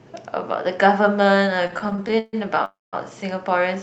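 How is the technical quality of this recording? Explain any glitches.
The recording has two timing glitches, both caused by delayed packets rather than lost audio. High frequencies are cut off around 8 kHz, as a call codec does.

From 1.67 to 2.35 s there are repeated stalls (stutter): 15 short breaks, the longest 140 ms, filling about 44% of that stretch. Packets arrived too slowly, so the jitter buffer kept running dry and the receiver stretched the last sound. The result drags and stammers, unlike a single freeze.

From 2.65 to 2.95 s a call audio freeze stops the sound for about 0.28 s, most of it (190 ms) near silence, then picks up where it left off. One long hold rather than many short ones points to the likely cause: packets held up in transit, emptying the buffer.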